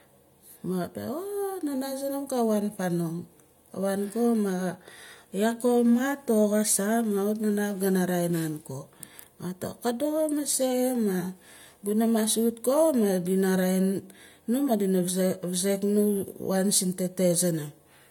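Nothing in this stretch of speech stands out as a technical problem; there's simply nothing here to flag.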